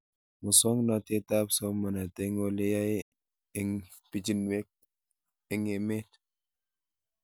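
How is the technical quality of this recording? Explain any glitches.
The speech has one glitch, a digital broadcast dropout, at 3.02 to 3.13 s, just after "ole yae". The receiver stopped getting valid frames, either because the signal was lost or because the frames failed their error check, so it muted its output until clean frames arrived again. The sound fades out in about 8 ms, leaving a hole of roughly 0.1 s before the programme resumes. A gap that size fits around three lost frames, and the speech that fell inside it is gone for good.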